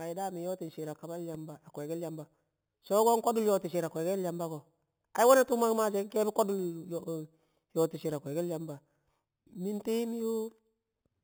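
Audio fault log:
Throughout: imaging from sample-and-hold upsampling. A metallic fizz at 4 to 8 kHz, about 18 dB below the speech, points to audio raised from an 8 kHz rate by unfiltered sample repetition. Unlike hiss, it follows speech level and moves against pitch.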